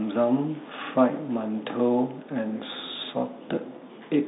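Right through the speech there's the Bluetooth CVSD headset codec at work: everything's squeezed into roughly 150 Hz to 3.7 kHz, and the one-bit up-down coding, which fits a 64 kbps stream, leaves plainly audible gritty, grainy damage.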